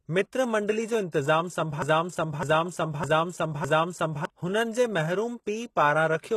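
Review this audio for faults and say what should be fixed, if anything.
The whole clip shows HE-AAC compression damage that is plainly audible, and the treble stops at about 12.3 kHz with nothing above it. The likely cause is spectral band replication: only the lower spectrum is coded, and the top band is rebuilt by copying lower bands upward under a coarse envelope. The upper harmonics are therefore synthesized rather than original and do not line up with the fundamentals across the crossover. The damage fits a very low bitrate, around 16 kbps. To prevent it, encode from the original source at a higher bitrate with plain AAC or another full-band codec.

From 1.82 s to 4.25 s there is a broken-record loop: a segment of about 0.61 s repeats exactly and back to back, four times in a row, filling that 2.43 s span. The pattern is likely a stalled player, encoder or stream that kept re-sending the last fragment in its buffer. 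The audio that belonged in that interval is missing and cannot be recovered from this file. To prevent it, monitor buffer underruns in the capture or streaming chain and re-record or re-fetch the affected section.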